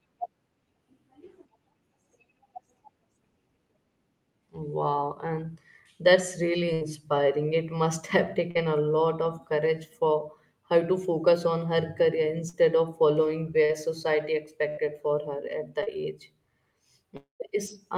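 Speech, marred by repeated packet loss. Two bursts of packet loss, at 6.73–6.83 s and 14.69–14.79 s, each drop about 80 ms; the receiver extends the preceding sound into a fading buzz or hiss before the speech resumes further on. Short concealed packet loss at 8.51–8.57 s, 12.49–12.55 s, 13.65–13.71 s and 15.83–15.89 s removes about 40 ms each time, heard as a brief smear or wobble where the gap was patched. At 17.17–17.42 s the sound decays into silence for about 150 ms before returning with roughly a quarter second gone, most likely a long network dropout.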